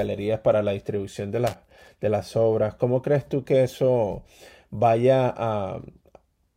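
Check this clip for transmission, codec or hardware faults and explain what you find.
One hardware fault stands out in this speech clip. Loose connector crackle runs from 1.47 to 1.88 s, a burst of about 0.4 s. A worn or dirty contact somewhere in the cable or jack is shifting, so the circuit keeps opening and closing in quick succession. Each break chops the signal, and any DC sitting on the line turns those breaks into pops. The result is a ragged, irregular scratching laid over the speech for that stretch.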